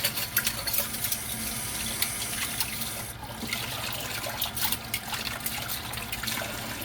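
No technical faults can be heard anywhere in the sound.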